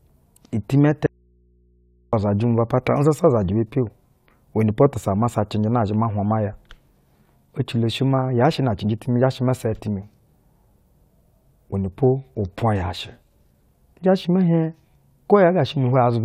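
The signal feed was likely interrupted from 1.06 to 2.13 s while the path after the break stayed live, an audio dropout to a faint residue lasting about 1.06 s. The speech cuts off abruptly, and the gap holds only mains hum from the open input, sitting around 40 dB below the speech level, before the voice snaps straight back in on "uzajɛ mu". The sudden edges make it sound nothing like a natural pause.

From 8.18 to 8.31 s, bit errors in weak DAB reception slipped past the error correction into the MP2 audio data, producing DAB burbling. Corrupted samples put short blips of noise in single sub-bands, and corrupted scale factors make sub-bands jump in level for up to a frame, so the speech is overlaid with burbling just before "yaa shɛ na cɛnjɛ". Fourteen frames were damaged, at a bit error rate of around a tenth of a percent.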